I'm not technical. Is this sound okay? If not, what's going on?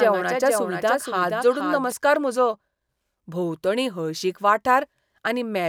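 No. From the very start until about 1.92 s, the speech is heard twice: a second, quieter copy trails about half a second behind. This is a doubled audio track. The second copy is clean, with no echo tail or room sound, and it cuts off abruptly. The likely cause is the same audio being recorded again through a slower route, or an edit that left two copies out of step.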